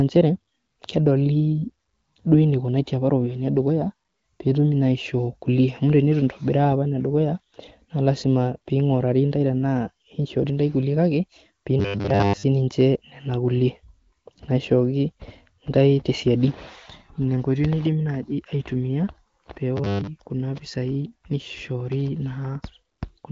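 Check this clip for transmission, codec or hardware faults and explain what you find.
The speech in this clip has one recurring fault.

Robotic sound from repeated short buffers occurs at 11.79 to 12.43 s and again at 19.77 to 20.07 s. The likely cause is audio arriving too seldom, so the playback side repeats the most recent short chunk instead of the missing material, and most of the real audio in those spans is lost. Each repetition imposes a fixed 100 Hz buzz, which fits a 10 ms buffer. The speech becomes a rigid, metallic drone that only loosely follows the words. The AMR wideband (HD Voice) coding, with its light roughness and nothing above 7.5 kHz, is not the source.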